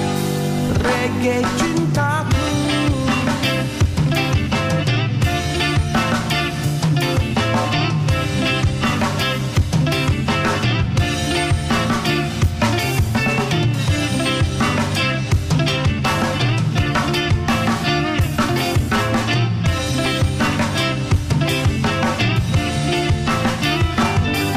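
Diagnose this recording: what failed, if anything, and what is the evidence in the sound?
A buffer-stage underrun with held sample at 20.05 s: the waveform freezes flat for about 2 ms, then resumes, with that audio lost.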